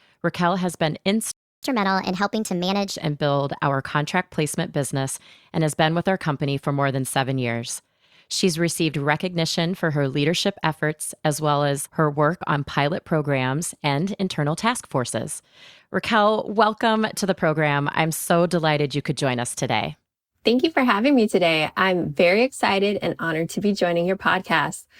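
At 1.32 s the speech cuts to silence for about 0.31 s, until 1.63 s, a playback stall. The likely cause is the player running out of buffered data or its output thread being blocked, so nothing reached the output until it recovered.

From 1.63 s to 2.89 s comes catch-up at higher speed. The player resamples its backlog at 1.25 times normal rate, so the speech runs faster and its pitch rises by roughly four semitones, then both drop back to normal once the lost time is recovered.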